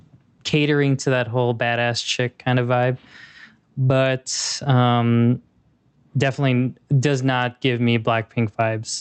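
Gain pumping throughout: the input gain is likely set far too high, so a fast limiter repeatedly clamps it, swinging the gain roughly 15 dB under loud speech.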